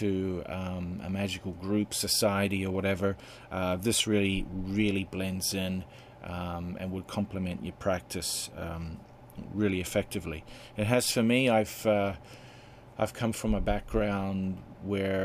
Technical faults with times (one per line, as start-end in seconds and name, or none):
none